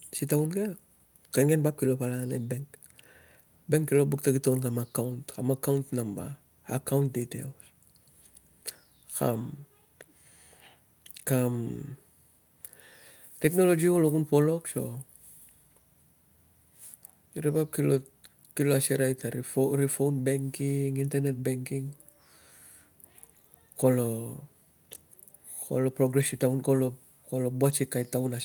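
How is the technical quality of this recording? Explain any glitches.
No technical faults are audible anywhere in the recording, so there are no glitches to explain.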